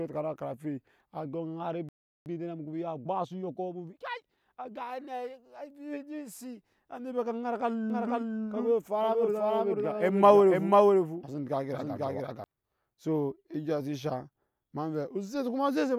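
A speech recording, it runs into trouble at 1.89 s when the player most likely ran short of data or had its thread blocked, causing a playback stall: the audio cuts to silence for about 0.37 s and resumes at 2.26 s. To recover the lost time, the player then applies a time-compressed catch-up from 2.26 to 4.72 s, trimming and cross-fading small slices so the speech runs about 1.15 times fast at unchanged pitch. From 7.9 to 12.44 s a doubled audio track appears, likely from a second, slower capture path or two misaligned copies in an edit. A dry, full-band copy trails the original by about half a second at roughly the same loudness, and it starts and stops abruptly.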